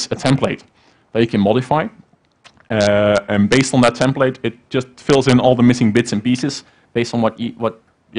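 At 2.73 s the sound abruptly slows by about 6 percent and drops about 107 cents, roughly a semitone flat. It snaps back at 3.44 s. At 6.42 s it jumps the other way, about 6 percent faster and 101 cents sharp, until 8.02 s. Speed and pitch move together each time. This is likely a drift correction step, where clock-matching software changed the playback rate in one jump to drain or refill its buffer.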